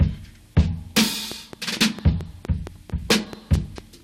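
From 1.32 s to 3.79 s there's a train of clicks, roughly ten evenly spaced pops at about 4.5 per second, peaking around 10 dB above the sound. It's likely interference or a faulty connection or power supply injecting pulses, and you hear a steady ticking sitting right on top.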